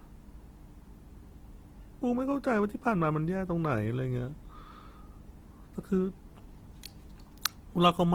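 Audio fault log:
Throughout, Opus compression: the speech sounds rough and grainy, its harmonics smeared into a noisy texture while the top end stays open. Likely a low-rate Opus encode in music mode, fitting about 16 kbps, filling starved bands with noise or folded copies.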